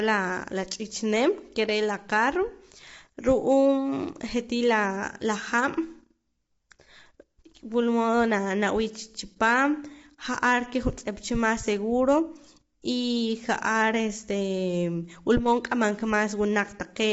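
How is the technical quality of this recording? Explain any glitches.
The speech is audibly degraded throughout by low-delay AAC compression. Voices sound rough and grainy, with a hiss-like texture filling the gaps between harmonics, and the top band is missing, with nothing above 7.7 kHz. This is likely AAC-ELD, the low-delay codec of video calls. Its short frames can't separate closely spaced pitch harmonics well, so with few bits to spend it smears noise between them and drops the highs. The damage fits a bitrate around 24 kbps.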